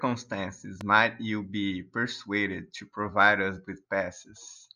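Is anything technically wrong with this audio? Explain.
Yes. There is a loud pop in this speech clip from 0.81 to 0.83 s. It is a single sharp transient, peaking a few decibels above the level of the speech, with the speech continuing unbroken underneath it. The likely cause is a brief voltage step or spike entering the signal chain, such as a connector being disturbed, a switch, a static discharge or a driver glitch. The circuitry after that point shaped the spike into a short pulse heard as a click-like thump.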